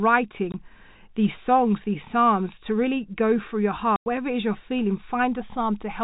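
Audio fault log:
0.52–0.54 s and 3.96–4.06 s: packet loss filled with silence. The speech drops out twice. The first hole lasts 20 ms, the second 100 ms. Both end abruptly. The lengths fit audio sent in 20 ms packets, with one packet missing and then five in a row. The receiver had nothing to play and put silence there. The telephone band of the G.711 coding stays steady across both gaps.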